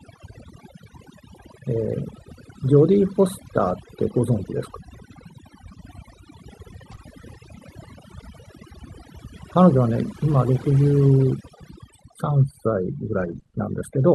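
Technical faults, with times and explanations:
Throughout: overdone noise removal. The background drops and breaks up into twinkling specks. An overly aggressive noise reducer is pulling individual frequency bands down or out whenever they resemble its noise estimate, taking quieter parts of the voice along with them.
6.91 to 6.93 s: lost packet rebuilt from error correction. A brief, rougher and noisier patch with no audible gap. One 20 ms packet was lost, and the decoder played the low-bitrate copy carried in the following packet. That copy is coarser than the original audio.
6.95 to 6.99 s: short concealed packet loss. A momentary smear or wobble right after the previous fault. About 20 ms of audio never arrived, so the receiver extended the last sound to fill the hole, then blended back into the real signal.
13.19 to 13.55 s: repeated packet loss (robotic sound). The sound turns choppy with pieces missing. 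Four separate gaps, none longer than 20 ms, totalling 80 ms or about a fifth of the stretch, were each patched by continuing the previous sound. Around a tenth of a second more was rebuilt.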